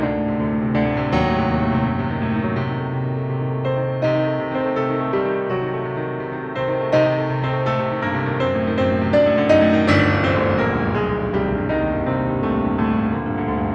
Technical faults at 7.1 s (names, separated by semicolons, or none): none